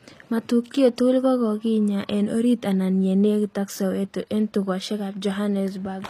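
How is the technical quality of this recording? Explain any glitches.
The recording is noticeably degraded by HE-AAC compression running through the whole speech clip. The treble has the telltale synthetic quality of a low-bitrate stream, likely HE-AAC at roughly 24 kbps. The upper band is rebuilt by copying lower bands upward, so sibilants sound gritty and lispy rather than crisp. On a spectrogram, the high frequencies look like smeared, repeated patches of the lower spectrum, and there is a clean cutoff with nothing above 14.9 kHz.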